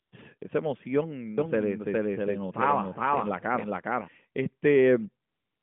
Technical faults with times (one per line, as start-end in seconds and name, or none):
0.02-0.12 AMR comfort noise
0.38-0.42 AMR comfort noise
1.38-4.08 doubled audio track
5.28-5.62 AMR comfort noise